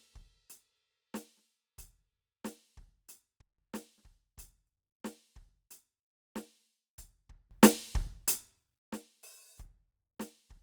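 At 3.41 s the music and its background noise drop together by about 21 dB until 3.58 s, then from 7.51 to 8.79 s both jump up by about 23 dB. This is a sudden gain jump, likely an unramped digital gain change.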